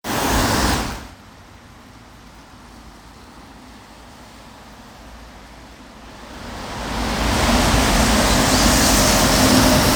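No technical faults are audible.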